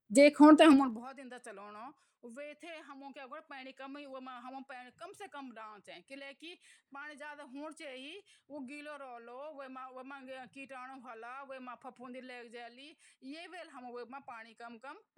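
Speech with zipper noise from 0.72 to 1.08 s, where the level drops by roughly 25 dB in unsmoothed 2 dB steps at about forty per second. Each jump clicks, giving a ticking buzz. The waveform envelope shows a staircase, and the spectrogram shows regularly spaced thin vertical lines.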